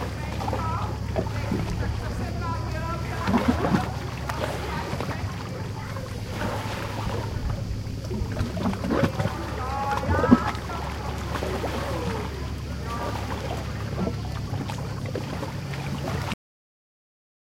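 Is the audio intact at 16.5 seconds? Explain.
No. A cut-off end begins at 16.34 s: the final buffers were never written, so the sound halts mid-event and drops straight to digital silence through the end. Unlike a dropout, the audio never returns, and unlike a fade-out, nothing decays.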